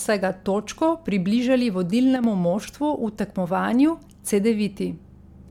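A speech recording with generation loss throughout. The sound has a swirling, hollow texture and softened consonant attacks, more than a single MP3 encode near 136 kbit/s would produce. That points to the material likely having been decoded and re-encoded around four times. Each pass requantises on a shifted frame grid, so the small noise and spectral holes accumulate even though content still reaches about 20.1 kHz. Between 2.16 and 2.24 s, one channel drops out for roughly 80 ms. The level falls abruptly by about 6 dB and then recovers. This fits one stereo channel being lost for that moment and the remaining channel alone feeding the mono sum, which halves the common signal and removes anything present only in the missing side.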